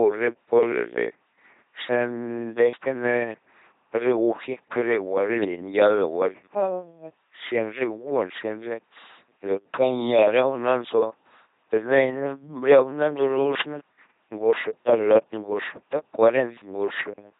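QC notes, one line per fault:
Throughout: LPC-10 vocoder. The speech is a heavily damaged, buzzing robotic rendering at 2.4 kbit/s, with each moment forced to either pulse-train buzz or noise. On a spectrogram there's a flat harmonic comb or smeared noise, and nothing above 3.8 kHz.
13.51–13.69 s: wireless microphone noise hit. A burst of static lasting about 0.18 s, as the radio link fades and receiver noise rises. The spectrogram shows a broadband vertical smear, and the waveform shows a brief ragged noise block with possible click spikes.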